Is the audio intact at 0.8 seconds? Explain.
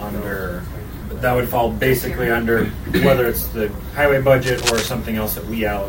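Yes, the audio is intact at 0.8 seconds, with no dropout, click, distortion or other fault at that point.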